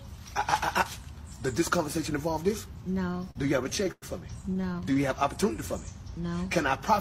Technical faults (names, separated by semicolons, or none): repeated stalls (stutter)